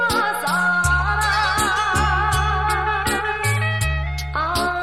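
No technical faults are audible.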